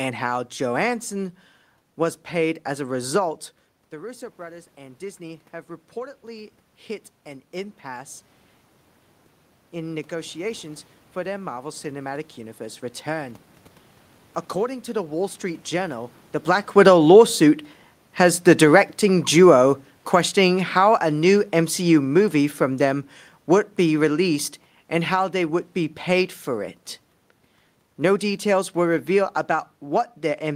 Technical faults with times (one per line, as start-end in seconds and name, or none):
2.70-8.26 automatic gain rising
9.72-13.43 automatic gain rising
16.63-26.37 automatic gain falling